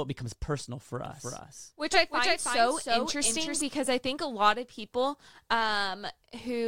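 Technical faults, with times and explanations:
1.06–3.62 s, doubled audio track: a full-band copy trails roughly 0.3 s behind, about 5 dB quieter, with no decay or room colour, unlike echo, and starts and stops abruptly. It is likely a second slower capture path or an out-of-step edit.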